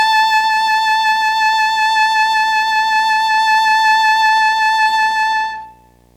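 From start to finish, the music carries video or display buzz: a screen or video cable is coupling into the audio path, leaving a steady 60 Hz buzz at the picture's field rate with hash above it, sitting roughly 35 dB below the music.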